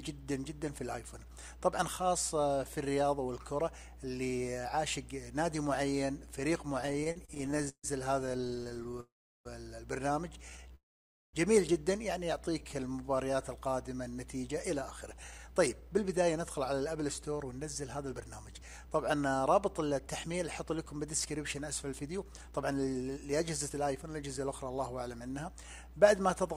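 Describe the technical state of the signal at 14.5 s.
At 14.5 s the sound is inside a jitter buffer speed-up running from 14.42 to 25.65 s. Audio had piled up in the receiver's buffer, so it trimmed short pitch-period-sized pieces again and again, playing back at about 109% speed with pitch unchanged and dropping about a second in total. It sounds hurried. On a spectrogram, harmonic spacing stays constant while events are compressed in time; the waveform shows tiny, seamless splices rather than gaps.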